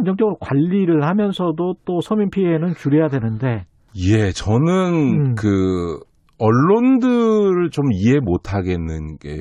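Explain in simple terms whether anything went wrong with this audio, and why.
Nothing went wrong here.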